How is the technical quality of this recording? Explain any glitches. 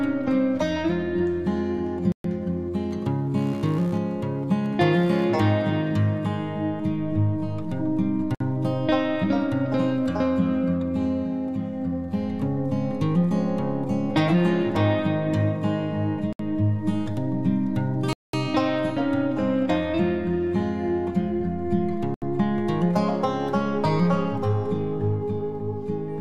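The recording has two kinds of glitch: repeated dropouts and a stretch of interference noise.

Bluetooth stall: the sound cuts to silence and resumes at 2.12 s (123 ms), 8.35 s (56 ms), 16.33 s (66 ms), 18.13 s (205 ms) and 22.14 s (77 ms), likely because interference emptied the headphones' buffer.

Computer activity noise: from 2.91 to 5.96 s a buzz pulsing near 70 Hz sits about 30 dB below the signal, as processor, graphics card or mouse activity disturbs the shared audio ground.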